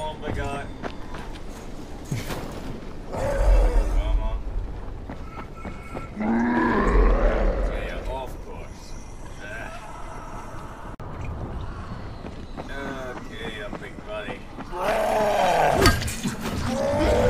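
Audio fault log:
15.68 s, compressed frames skipped: the decoder never played a short stretch of the coded stream, either because it was missing or rejected as damaged, so about 50 ms of sound vanishes, which fits two lost frames of 23.2 ms.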